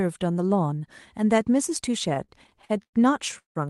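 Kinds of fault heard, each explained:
Repeated stalls (stutter): between 2.09 and 2.95 s playback halts ten times as packets arrive late. Each time the receiver stretches the last sound to cover the wait, 261 ms in all, the longest 105 ms, about 30% of that span. Nothing is lost, but the audio drags.
Call audio freeze: from 3.38 to 3.57 s the sound stops. A brief continuation of the last sound fades into 140 ms of silence, inserting 171 ms in total. The likely cause is delayed packets draining the jitter buffer. Playback then resumes where it stopped.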